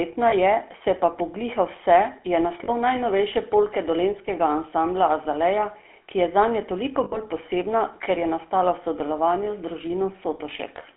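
Throughout, the speech carries the buzzy, gravelly roughness of the GSM full-rate codec, plainly audible and consistent with 13 kbps coding. Pulse-driven vocal-tract modelling discards fine excitation detail, and the band is limited to roughly 250 Hz to 3.4 kHz.

Lost GSM frames occur at 0.30–0.34 s, just before "je se pa pogliha"; at 2.64–2.70 s, between "pa pogliha vse je" and "najnovejše polke dolenjskega ansambla"; and at 7.04–7.18 s, between "ki je zanje" and "posebna ker je nastala". The decoder repeats the last good frame, so the sound is held as a brief metallic ring lasting about 20, 40 and 80 ms respectively.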